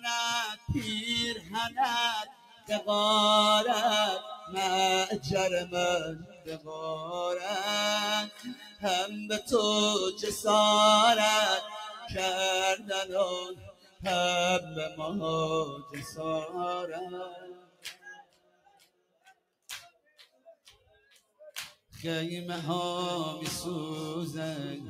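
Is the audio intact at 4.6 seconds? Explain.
No. Between 4.2 and 7.14 s the sound sinks by up to about 15 dB for roughly a second and a half in total, its sustained parts and decays cut short: sound cut by the noise suppressor, which mistook it for noise. The whole clip also pumps and thins, swinging by around 15 dB, because a speech-oriented noise suppressor applied to music or sounds keeps treating steady tones and tails as noise.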